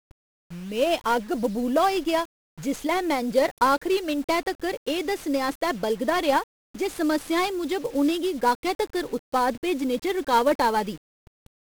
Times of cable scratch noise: none

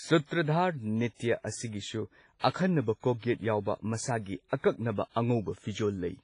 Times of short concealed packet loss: none

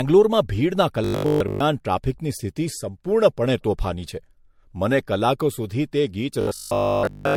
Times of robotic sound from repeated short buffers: 1.04-1.64, 6.41-7.35

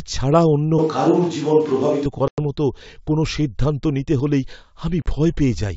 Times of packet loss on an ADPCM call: 2.28-2.39, 5.02-5.06

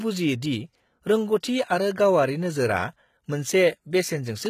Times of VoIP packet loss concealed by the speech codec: none

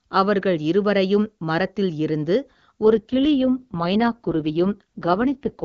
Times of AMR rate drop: 2.84-5.63

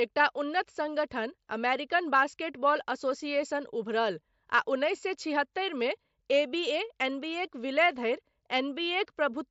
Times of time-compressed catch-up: none

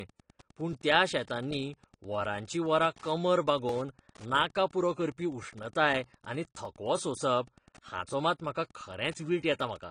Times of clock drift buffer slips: 0.73-9.61

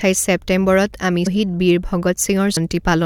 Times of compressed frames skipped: 1.26, 2.56

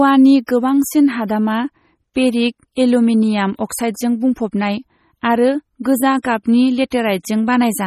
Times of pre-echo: 0.47

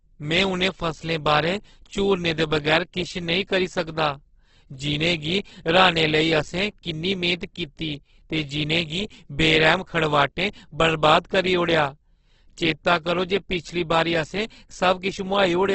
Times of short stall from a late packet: none

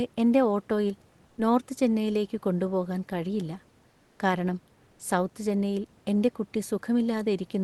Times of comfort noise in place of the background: 1.27-1.37, 3.89-4.19, 4.91-4.99

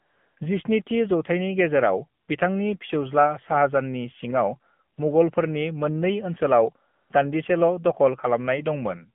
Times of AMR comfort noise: 0.00-0.36, 2.22-2.28, 4.96-4.98, 6.94-7.10

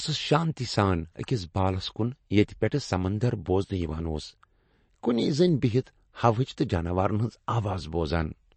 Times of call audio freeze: none

